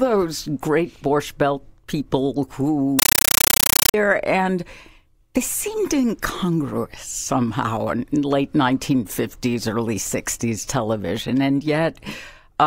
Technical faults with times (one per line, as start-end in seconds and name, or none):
2.99-3.94 compressed stream played as audio